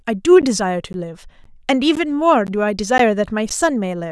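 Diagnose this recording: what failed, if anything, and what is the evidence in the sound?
Gap between chunks at 0.42, 0.93, 1.44, 1.95, 2.47, 2.98 and 3.49 s: at the chunked playback or storage stage, the speech stops for 13 ms with hard edges, then resumes intact. Each 0.5 s chunk is followed by this hole, so the gaps recur every 0.51 s.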